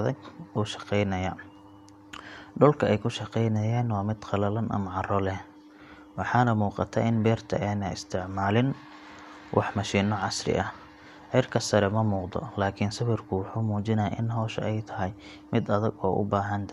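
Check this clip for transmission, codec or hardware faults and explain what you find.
Nothing stood out on listening to this speech recording.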